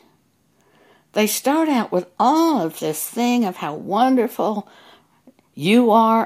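No technical faults can be heard anywhere in it.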